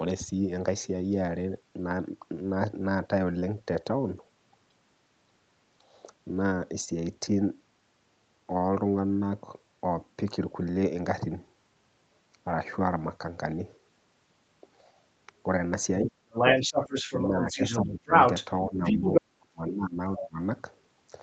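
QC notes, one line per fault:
16.01–16.16, 17.29–17.60, 17.94–18.10, 18.65–19.05, 19.21–19.99, 20.17–20.41 s: speech suppressed in double talk. The speech dips roughly 10 to 35 dB, likely an echo canceller ducking the talker while the far end speaks.
16.31–18.45 and 18.83–19.21 s: other side's voice leaking through. A second voice sits about 5 dB above the talker, likely loudspeaker echo the canceller failed to remove from the microphone.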